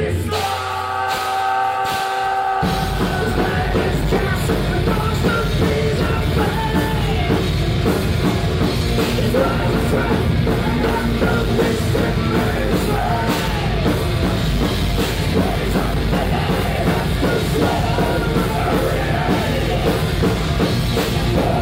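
No technical faults can be heard anywhere here.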